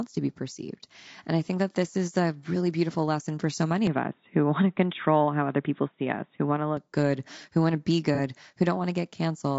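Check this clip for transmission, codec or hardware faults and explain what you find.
Three faults are present in this speech clip.

The whole clip has a rough, grainy texture. Noise sits between the harmonics, and the top band is thin. This is likely low-delay AAC compression, such as AAC-ELD. Its short frames resolve pitch poorly, and the damage fits a bitrate near 32 kbps.

From 3.87 to 6.77 s, after "lesson for so many", the sound turns dull and boxy. Nothing remains above 3.8 kHz. A faint new noise floor sits well below the speech. The level barely changes and there is no gap. It clears again before "good who want to". The input was probably switched to a poorer device and then back.

At 8.15 to 8.20 s, just after "who want to be", a brief smeared, noisy patch appears. This is AAC frame loss with concealment. About 30 ms of audio went missing, which fits a single frame. The decoder filled the hole by reusing the last good spectrum.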